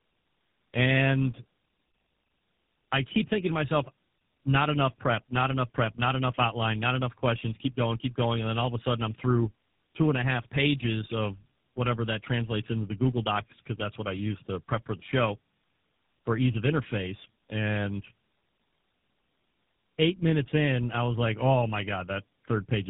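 From start to finish, the speech carries tandem speech coding. It sounds as if three low-rate speech codecs were applied in a row, with transcoding at each link border. Each coder had to model the already damaged output of the one before, so the errors stack. The result is rougher, more muffled and more warbly than any single codec. The final stage sounds like GSM full rate. Nothing is heard above 3.8 kHz.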